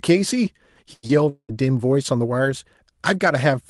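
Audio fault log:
0.93–1.05 s, burst of packet loss: about 100 ms goes missing; the receiver stretches the last sound into a fading buzz or hiss for 94 ms, then jumps ahead.
1.07–1.11 s, short concealed packet loss: roughly 20 ms never made it, so the preceding sound gets extended and blended back in, leaving a quick smear or wobble.
1.29–1.51 s, long network dropout: the sound trails off as a fading buzz or hiss filling about 0.2 s, the last 60 ms of it silence, before resuming, likely because around 200 ms of audio never arrived.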